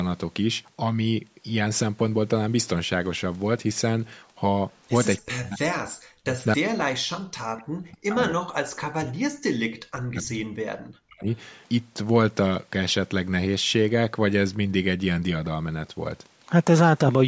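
From 5.22 to 11.27 s the speech keeps sinking and breaking up, falling roughly 40 dB at its deepest, for about five seconds overall. This is likely speech suppressed in double talk: with both sides talking, the echo canceller mistook the talker for echo and turned it down.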